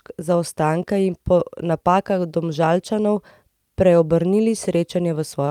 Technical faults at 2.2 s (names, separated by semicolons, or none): none